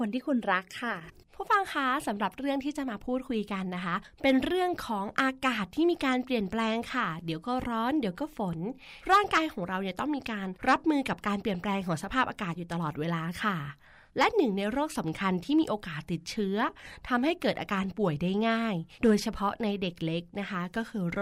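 No technical faults are audible anywhere in the speech.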